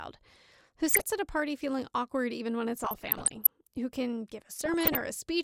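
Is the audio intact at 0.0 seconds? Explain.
Yes, the speech is intact at 0.0 seconds, with no fault at that moment.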